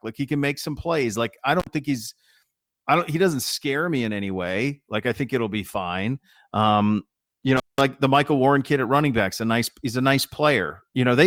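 Speech, interrupted twice by intermittent contact. From 1.60 to 1.67 s the sound cuts out for 53 ms, just before "think he's". From 7.57 to 7.81 s it drops for 184 ms. A loose cable or plug briefly opens the line, so each gap has crackle at its edges.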